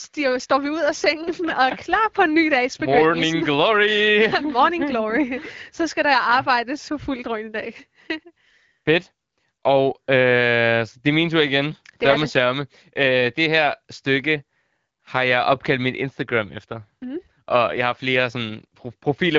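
No technical faults are audible in this speech, which comes through the AMR wideband (HD Voice) codec at 12.65 kbit/s with only light coding effects and a bandwidth that stops at 7.5 kHz.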